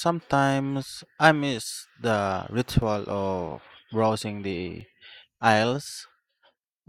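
Speech, with two tiny skips at 2.82 s and 4.81 s caused by overlap between stream segments. Where consecutive 2-second segments carried overlapping time stamps, the player trimmed the overlap from sound that was not actually duplicated, discarding about 5 ms the first time and about 15 ms the second. On a waveform each spot shows an abrupt discontinuity where the signal jumps to a new level. A spectrogram shows a thin vertical broadband line at each point.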